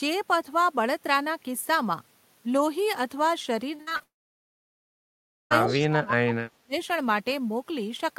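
From 3.75 to 4.02 s there's repeated packet loss, giving that robotic sound. Four short holes, the longest about 59 ms, get patched by stretching the previous bit of sound, so roughly half that stretch is fill. It comes out choppy.

Right after, from 4.04 to 5.53 s, you get a long network dropout. Nearly 1.5 s of audio never arrives, likely because the connection stalled. A brief smeared tail of the last sound fades into about 1.4 s of silence, then the audio picks up with that chunk simply gone.

Just as it returns, 5.67 to 5.79 s, there's an echo leak: a faint copy of the sound trailing about 175 ms behind, around 10 dB below the voice. It's likely a speakerphone's echo canceller letting some pickup slip back through.

Overlapping that, from 5.65 to 6.74 s, the speech is suppressed in double talk. The voice gets pushed down hard, about 35 dB at its deepest, for roughly a second. That's likely the echo canceller clamping down because both ends were talking at once. 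It sounds dipped.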